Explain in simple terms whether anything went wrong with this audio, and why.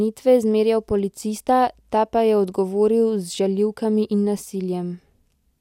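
Nothing went wrong here: the speech comes through with no dropouts, glitches or other faults to point to at any moment.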